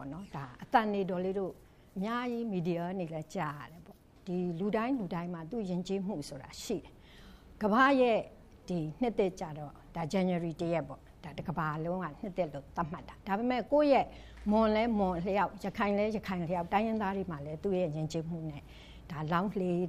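No technical faults can be heard anywhere in the recording; the signal stays steady and intact throughout.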